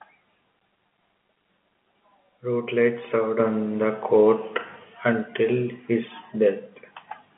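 No faults: the speech sits in a standard narrowband telephone channel, G.711 mu-law at 64 kbps with a line band of 200 Hz to 3.4 kHz and nothing above 3.8 kHz.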